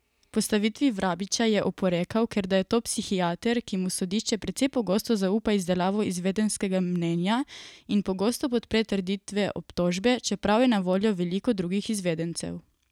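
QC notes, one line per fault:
Nothing stood out on listening to this speech clip.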